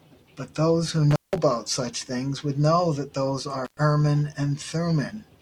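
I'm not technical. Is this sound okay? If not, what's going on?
No, there's an intermittent contact: a loose cable or plug briefly losing connection. The speech drops out with a crackle around 1.11 to 1.38 s (about 0.17 s of gap) and again from 3.65 to 3.77 s (about 0.11 s), leaving faint hiss.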